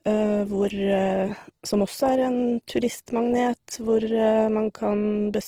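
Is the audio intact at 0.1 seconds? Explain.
No. At 0.1 s, as across the whole speech clip, the sound is grainy and rough, with tones dissolving into noise rather than the swirling, hollow gaps typical of MP3. This points to Opus compression in its full-bandwidth music mode, likely at a rate near 16 kbps. Bands starved of bits are refilled with noise or folded copies of lower bands.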